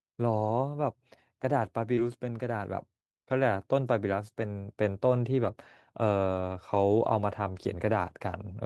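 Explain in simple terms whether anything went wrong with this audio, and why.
Short concealed packet loss at 1.95 to 1.99 s: a sliver of the speech arrived too late, so the receiver stretched the preceding sound to cover the hole, leaving a brief smear.

Lost packet rebuilt from error correction at 1.97 to 1.99 s, 4.43 to 4.45 s, 5.43 to 5.49 s and 7.51 to 7.65 s: missing pieces were replaced with rougher backup copies, so those moments sound noisier.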